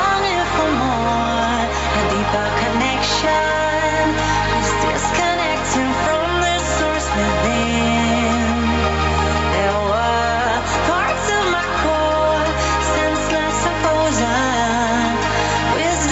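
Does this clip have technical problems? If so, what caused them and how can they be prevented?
Yes. Gain pumping runs throughout: the gain swings roughly 5 dB, pulled down under loud sounds, likely from excessive input gain driving a fast limiter. The waveform looks flattened, with loud and soft parts closer in level. Lowering the microphone gain so the limiter rarely engages prevents it.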